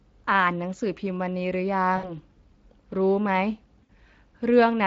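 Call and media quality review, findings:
Speech hoarse and grainy across the whole clip, with plainly audible coding damage. Probable component: Speex codec, in a mode that sounds like roughly 20 kbps. CELP with too few bits to model the excitation leaves residual noise and roughness on every voiced stretch.

Stretched concealment sound that fades, then weak, smeared speech, at 1.97–2.18 s and 3.83–3.90 s. Probable component: VoIP packet loss concealed by the speech codec. Each gap fits about 60 ms lost, likely three 20 ms frames. The decoder extrapolates the last pitch and filter with falling gain, and recovery lags after packets return.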